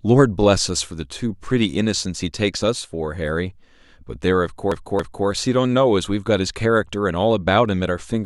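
From 4.72 to 5.27 s, repeated frames make speech stutter: one 278.6 ms block replays twice, adding 557 ms, shown as identical spectrogram patches.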